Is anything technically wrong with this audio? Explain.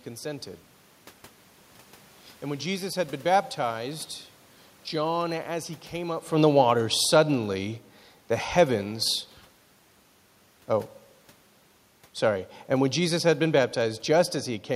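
Yes. From 12.24 to 14.45 s the speech and the room noise behind it sink together by about 3 dB. This is automatic gain falling: the gain control judged the input too loud, or its background noise too strong, and eased its gain down. The level shift around 6 seconds is different, because there the talker moved relative to the microphone.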